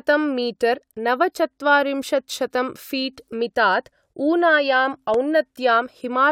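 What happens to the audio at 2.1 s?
Nothing goes wrong at 2.1 s; the speech runs on intact through that moment, with no dropout, click or distortion to be heard.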